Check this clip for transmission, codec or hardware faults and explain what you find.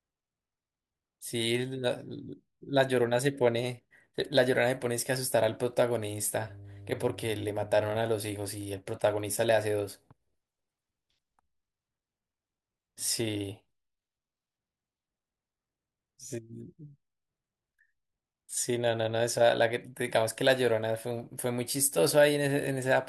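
One fault is present: mains hum. From 6.47 to 7.98 s, a steady 50 Hz tone sits under the speech, roughly 20 dB below it. A ground loop or nearby transformer is coupling the power line into the signal. It sounds like a low, constant drone.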